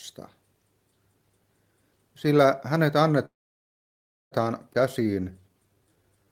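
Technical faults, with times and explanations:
3.25–4.35 s, call audio freeze: sound stops into roughly a second of silence, then resumes where it left off, likely packets delayed until the jitter buffer emptied.
4.73–4.77 s, skip ahead: playback jumps forward almost seamlessly, dropping about 0.7 s of audio as a stretch was dropped while later packets waited.
5.00–6.26 s, jitter buffer slow-down: repeated pitch periods add 210 ms, so audio runs at 84% speed with unchanged pitch, sounding drawn out while the buffer rebuilds.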